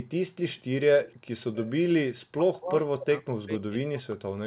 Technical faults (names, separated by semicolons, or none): echo leak; speech suppressed in double talk